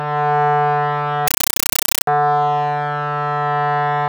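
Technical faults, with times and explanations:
1.28–2.07 s, compressed stream played as audio: the music turns to loud chattering static, 8 ms noise bursts 31.25 times a second, which fits an undecoded 384 kbps AC-3 stream.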